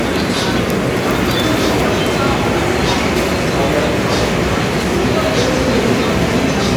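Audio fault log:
No faults found on this recording of sounds; nothing to log.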